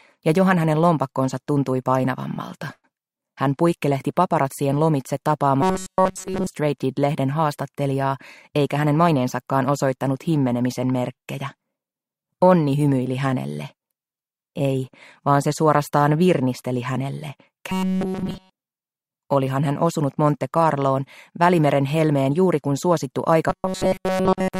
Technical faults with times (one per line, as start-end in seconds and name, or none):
2.73-2.87 call audio freeze
5.62-6.47 robotic sound from repeated short buffers
8.50-9.24 jitter buffer speed-up
17.70-18.50 robotic sound from repeated short buffers
23.50-24.59 robotic sound from repeated short buffers